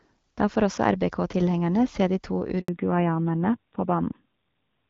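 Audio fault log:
2.60–2.68 s handover gap: speech cuts out for 80 ms as the call switches networks and no frames arrive, so that stretch of speech is lost outright.
2.68 s to end fallback to narrowband: after the light-artefact HD Voice coding before the gap, nothing above 4 kHz remains. The voice turns duller and rougher, which fits a drop to AMR-NB at a low bitrate such as 7.4 kbit/s.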